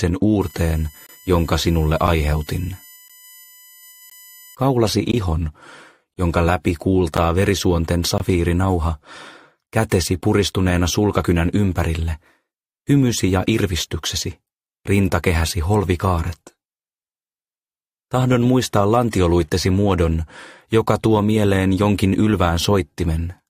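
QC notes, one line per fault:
0.41 to 4.55 s, USB whine: A fixed-pitch tone built on a 1 kHz fundamental, strongest at its 13 kHz harmonic and roughly 25 dB under the sound. The bus's 1 ms frame timing draws current in pulses that leak in through shared power or ground.
1.07, 2.07, 3.08, 4.10, 5.12, 6.14, 7.17 and 8.18 s, gap between stream segments: Hard-edged silent holes of about 8 to 26 ms recur once per second, matching 1.0 s segments whose timestamps leave gaps that the player fills with silence. No audio is lost.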